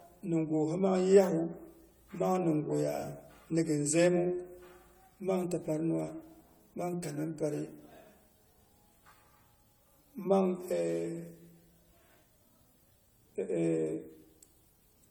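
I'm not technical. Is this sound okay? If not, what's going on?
No. The speech was likely re-compressed about seven times, known as generation loss, so throughout it sounds swirly, hollow and smeared, with blurred edges.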